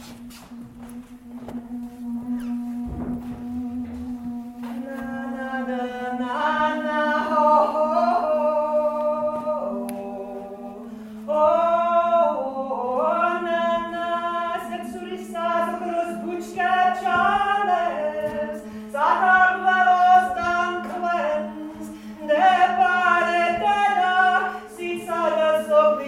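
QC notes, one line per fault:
No faults found. Nothing here needs a QC entry.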